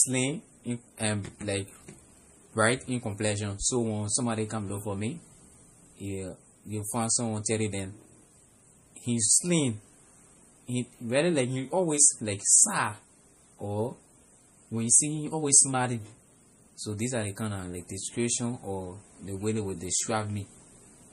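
Throughout the recording, the speech has likely been squeezed through MP3 compression at a bitrate too low for it, which fits roughly 40 kbps. The encoder has removed everything above 15.1 kHz and drops weak detail frame by frame, leaving plainly audible watery swirling, chirpy s sounds and softened attacks.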